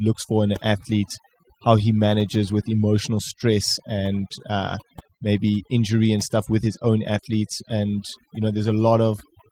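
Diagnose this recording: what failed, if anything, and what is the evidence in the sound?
The failure is overdone noise removal at the call-processing stage, present throughout the speech. The suppressor pushes individual frequency bands down to near silence whenever they sit close to its noise estimate, leaving twinkling residual specks as quieter speech detail is removed. The Opus coding downstream, running fullband with content up to about 20.2 kHz, shows only light damage.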